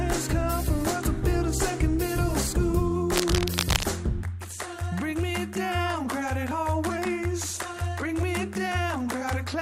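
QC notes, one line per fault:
3.11–3.84 s: cable scratch noise, dense uneven scratching bursts only a few dB below the signal, likely from a worn cable or connector with rapidly changing contact resistance.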